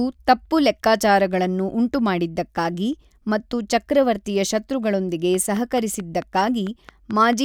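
From 5.35 s to 7.34 s, right after "ಉಂಟುಮಾಡಿದ್ದಕ್ಕಾಗಿ ಮತ್ತು ಚಕ್ರವರ್ತಿಯ ಶತ್ರುಗಳೊಂದಿಗೆ", a train of clicks ticks steadily over the speech at 4.53 per second, around ten similar pops, peaking about 5 dB above the speech itself. The likely source is electrical interference or a faulty connection or power supply. On a spectrogram they show as evenly spaced thin vertical broadband lines; on the waveform, as regular sharp spikes standing above the speech envelope.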